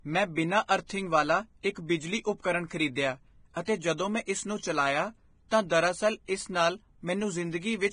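Throughout the speech, content stops abruptly near 9.7 kHz, and the treble beneath it sounds hissy and grainy, likely from heavy Vorbis compression at a low bitrate around 23 kbps. On a spectrogram this shows as a flat ceiling with speckled, noisy high-frequency texture.

Pre-echo appears at 3.65 to 3.68 s, spreading about 26 ms, and at 5.49 to 5.52 s, about 32 ms, just before "ਤਾਂ ਦਰਅਸਲ ਇਸ ਨਾਲ". Block quantisation noise leaks ahead of each sharp onset, heard as a brief hiss with softened attacks and seen as a smear preceding the transient.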